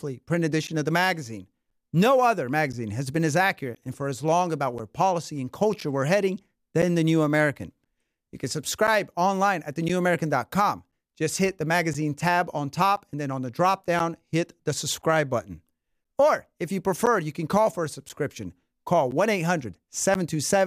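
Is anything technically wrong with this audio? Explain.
Yes. Periodic USB or driver dropouts run from 0.67 s to 20.15 s, roughly every 1.02 s, with about twenty events in all. Each time, something on the system briefly stalls the audio path and around 10 ms of the speech is lost and replaced by silence. This is heard as small, evenly spaced ticks that occur only while there is signal. The strict regular timing sets it apart from random packet loss or clipping clicks, which follow no fixed rhythm.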